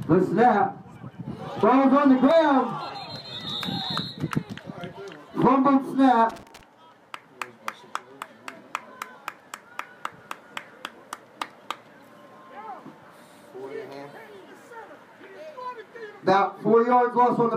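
A short burst of loose connector crackle runs from 6.30 to 6.61 s, roughly a third of a second of irregular scratching. A worn or dirty contact is making and breaking as it shifts, chopping the audio on and off. On a waveform this shows as ragged dropouts and sharp spikes; on a spectrogram, as scattered broadband vertical streaks across that span.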